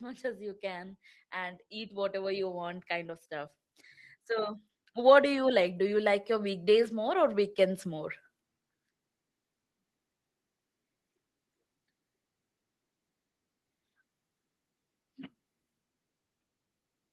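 From 0.05 to 3.59 s and again from 4.26 to 8.15 s, automatic gain rising lifts the speech by about 7 dB and then about 8 dB. The control judged the input too quiet and crept its gain up, so background swells with the voice over several seconds, unlike compressor pumping, which tracks each syllable.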